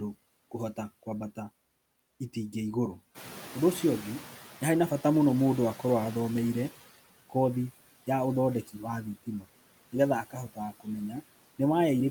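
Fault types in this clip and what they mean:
Noise suppressor artifacts: Across the whole speech clip, a frame-by-frame suppressor pulls down the bands it judges to be steady noise by about 16 dB. The background dips in the gaps and swells back under speech. On a spectrogram, the noise floor between phrases looks mottled and patchy, with isolated bright specks instead of an even haze. The waveform shows the floor pumping with the speech envelope.
Noise suppressor catching up: The room noise jumps by about 12 dB around 3 s, and the suppressor's noise estimate trails behind it. From 3.14 to 6.76 s the louder noise passes with less reduction, about 11 dB. It then sinks as the estimate adapts over roughly 3.6 s. A spectrogram shows a brighter noise band in that stretch that fades gradually, and the waveform's floor thickens and then slowly narrows.
Speech cut by the noise suppressor: Between 10.24 and 10.87 s, the suppressor mistakes part of the speech for noise and turns it down along with the background, by as much as about 16 dB. 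In total about a fifth of a second is affected, so soft sounds come across swallowed or faint. On a spectrogram, speech energy thins into dark gaps or missing upper bands there. The waveform shows brief, abrupt dips inside otherwise continuous speech.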